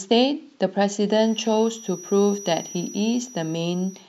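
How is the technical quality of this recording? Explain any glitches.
A thin, steady whistle near 5.8 kHz enters under the speech at 1.04 s and runs to the end of the clip, sitting roughly 20 dB below the speech and swelling and fading slowly in level. This feedback whistle is likely a loudspeaker-to-microphone loop held just at the edge of feedback, sustaining one high frequency without building up.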